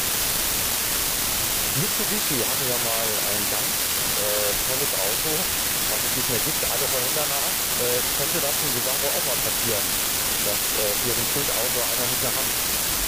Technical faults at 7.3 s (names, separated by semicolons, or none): unreliable data bit